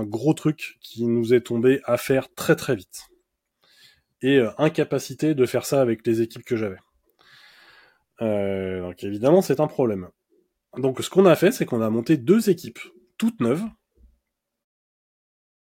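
Nothing stood out on listening, and the speech ends with a smooth fade out that begins around 14.5 s and finishes at 14.66 s, the way an editor would close it.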